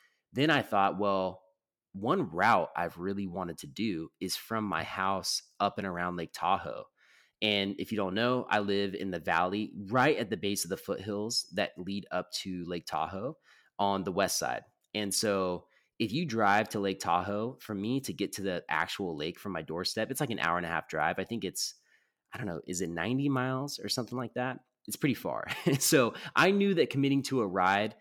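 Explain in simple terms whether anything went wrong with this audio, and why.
Nothing went wrong here: the speech comes through steadily the whole way, with no glitches, dropouts or odd noises to trip over.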